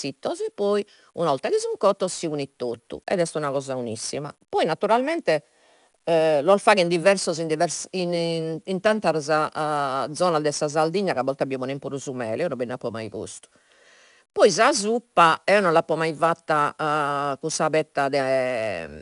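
A speech recording carries 4-bit ADPCM compression from start to finish. Each sample is coded as a small step from a prediction, so a gritty hiss rides on every loud syllable. The damage is plainly audible. Nothing survives above 10.6 kHz, which fits a rate near 88 kbps.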